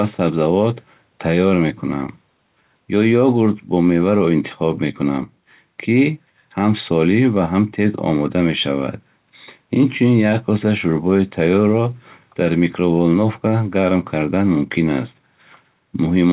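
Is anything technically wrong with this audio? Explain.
No, nothing stood out on listening to this speech, which comes over a call path whose audio band stops at about 4 kHz.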